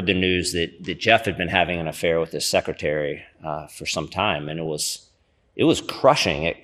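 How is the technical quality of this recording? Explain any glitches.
The technical quality is poor. The speech carries audible low-bitrate compression throughout and is broken twice by reception errors.

MP2 compression, throughout: the speech sounds dull and granular, with a plainly audible gurgle. This is likely MPEG Layer II coding starved of bits, which fits a rate around 80 kbps. Upper sub-bands drop out and flicker, and the remaining bands are quantised coarsely.

DAB burbling, at 1.53 to 1.76 s and 4.43 to 4.88 s: short blips of noise sit over the speech. Bit errors, roughly a fifth of a percent, slip past the error correction and corrupt the sample and scale-factor data. Individual sub-bands then carry short blips of noise.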